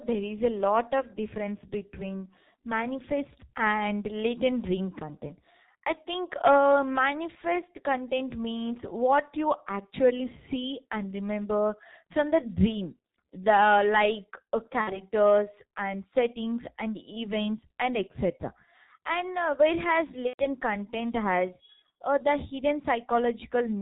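Speech passed through the G.723.1 codec throughout, at a heavily damaging rate that sounds like about 6 kbit/s, so nothing above 4 kHz survives and the voice is muffled, hoarse and blurred at consonants. VoIP packet loss concealed by the speech codec strikes at 14.81–15.03 s and 20.27–20.43 s. The decoder bridges roughly 60 ms and 120 ms gaps by extending its last pitch and filter, producing a fading buzzy tone or coloured noise that stays weak briefly afterwards.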